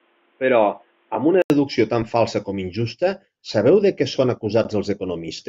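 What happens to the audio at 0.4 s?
The input was likely switched to a poorer device, which is active from 0.0 to 1.5 s. That path passes a narrower band, so the speech sounds dull and boxy. It clears after a silence of about 80 ms, just before "deducció tan falsa com".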